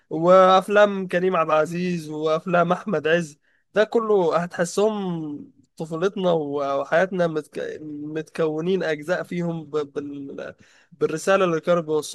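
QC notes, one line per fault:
No technical faults can be heard anywhere in the speech recording; the signal stays steady and continuous over its full duration.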